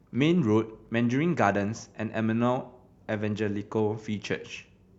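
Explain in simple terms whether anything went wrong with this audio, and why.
Yes, one small glitch: a Bluetooth stutter at about 0.89 s. For a split second the sound catches, repeating a tiny 20-millisecond slice, then jumps ahead. It's what you'd hear when a single wireless packet goes missing and the receiver replays its last bit while waiting.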